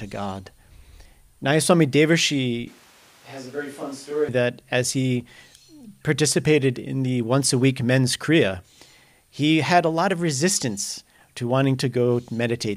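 A speech recording. From 2.68 to 4.28 s the voice turns hollow and roomy, drops about 10 dB, and gains background noise. It snaps back before "that as he". This is likely a switch to a distant microphone.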